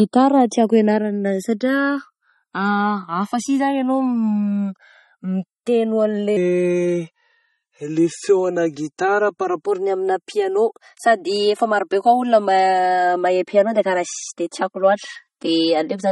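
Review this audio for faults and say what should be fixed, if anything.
Channels drifting apart runs through the whole clip. The two channels sit on clocks roughly 200 ppm apart, so their offset creeps to about 4 ms, giving slow flanging in mono.

MP3 compression damage is plainly audible throughout. Weak components flicker with a watery swirl, which fits an encode at a bitrate as low as 32 kbps.

A section at the wrong speed runs from 6.37 to 9.66 s, ending just before "ny amina piano sady". It plays at 0.855 times normal speed, about three semitones low and slow, likely from a clock mismatch during editing or playback.

To prevent these, record both channels from one shared clock, keep sample rates consistent through editing, and archive or deliver at a much higher bitrate or losslessly.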